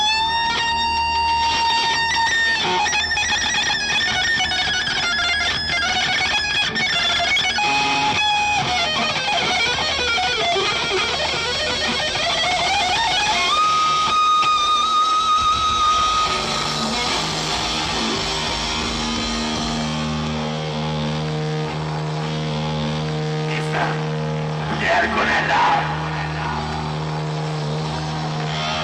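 At 2.55 to 2.57 s the audio jumps straight ahead with no gap, with about a second of material simply gone. This is a skip ahead: with later audio already queued, a stretch was dropped, in transit or by an overflowing jitter buffer, and the two sides were joined directly. Four passages then run fast at unchanged pitch: 2.83 to 3.59 s at 104%, 4.29 to 8.50 s at 106%, 10.21 to 10.95 s at 104%, and 13.59 to 14.55 s at 105%, with the two faster ones sounding hurried. This is jitter buffer speed-up. The buffer held more audio than its target, so the receiver repeatedly removed pitch-period-sized pieces to cut delay, about 300 ms in the long passage and roughly 40 to 50 ms in each of the others.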